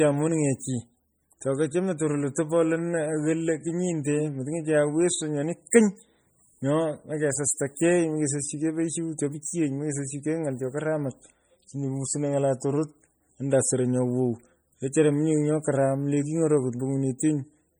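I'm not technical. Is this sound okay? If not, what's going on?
No. Heavy MP3 compression runs through the whole speech clip and is the likely cause of its watery, swirly quality. The encoder was short of data, so it threw away faint detail that now flickers in and out, leaving s sounds metallic and word onsets smeared.

Pre-echo occurs at 17.18 s: a brief hiss arrives just before a sharp sound, which itself sounds softened. The compression spreads its noise across a short chunk of sound, so the quiet instant before the attack gets noise meant for the louder part.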